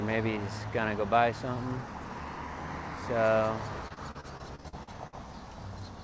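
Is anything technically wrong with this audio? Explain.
Yes. Repeated packet loss (robotic sound) runs from 3.88 to 5.14 s. Over that stretch there were about ten gaps where packets went missing or arrived too late. The receiver filled each gap by extending the last stretch of sound it had, and the next loss followed before playback could recover. The longest hole lasts about 53 ms, and roughly a quarter of the passage is concealed rather than received. The sound turns choppy, with small pieces dropped out. The audio also carries no content above 8 kHz, which points to a wideband call codec such as G.722 at 64 kbps on the call path.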